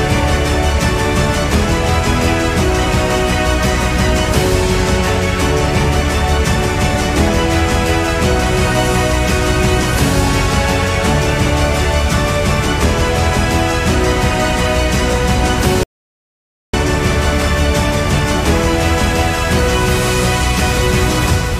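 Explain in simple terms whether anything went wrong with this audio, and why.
At 15.83 seconds the sound cuts off abruptly and comes back at 16.73 seconds, leaving a gap of about 0.9 seconds of total silence. Even the background room sound disappears during that stretch, and whatever happened in that moment is lost. This is an audio dropout to silence. The likely cause is that the input was briefly interrupted, for example by a loose connection or an accidental mute, while the recording carried on saving nothing but silence.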